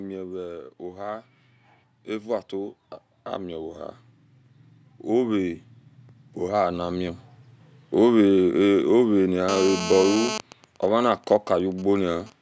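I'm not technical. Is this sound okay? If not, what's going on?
No. Right at the start, from 0.05 to 0.82 seconds, the sound is loud and then sinks, background and all. This is automatic gain falling: the recording device judged the input too loud and turned itself down over under a second.

Twice afterwards, from 0.78 to 3.82 seconds and from 5.06 to 8.22 seconds, the speech and the room behind it slowly swell louder together over about three seconds. That is automatic gain rising: the device decided the sound was too quiet and gradually turned itself up.

From 9.49 to 10.35 seconds a harsh, raspy buzz sits on top of the speech and has nothing to do with it. This is GSM phone buzz: an older 2G mobile phone nearby, in a call, pulses its radio 217 times a second, and the audio electronics pick those pulses up as sound.

From 10.35 to 12.32 seconds the buzz turns into a quieter, even pattern of ticks with a longer buzz twice a second. 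These are GSM signalling bursts: the same phone, still in the call but with its user silent, sends only occasional short groups of radio pulses, which leak into the audio the same way.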